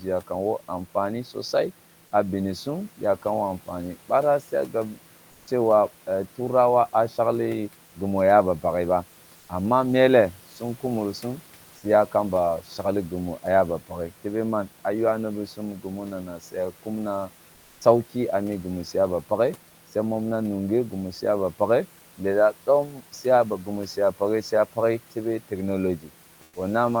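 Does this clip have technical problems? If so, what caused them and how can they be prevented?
Yes. Speech cut by the noise suppressor occurs three times: at 16.26–16.55 s, between "ywa ni bi sum" and "ah kumna", dipping by about 11 dB; at 22.86–23.01 s, between "suya ba pakghe lelah" and "suya ba", by about 8 dB; and at 25.98–26.09 s, by about 12 dB. The suppressor mistook parts of the speech for noise and pulled them down with the background, so they sound swallowed. Unlike a dropout, the sound is faint rather than gone. Lowering suppression strength or adding a speech-protecting hold time would prevent it.

Comfort noise in place of the background appears at 17.53–17.77 s, a 240 ms pause between "ah kumna" and "ah mi gimu su". The likely cause is Opus DTX: the sender stopped transmitting during the pause, and the receiver filled it with synthetic noise. The real background sits about 33 dB below the loud speech. 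The substitute is only about 1 dB quieter, so what gives it away is its smooth, featureless texture. Unlike suppression, no speech is touched. Disabling DTX would prevent it.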